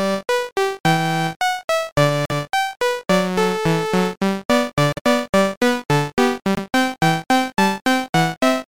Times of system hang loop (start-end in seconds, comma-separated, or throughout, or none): none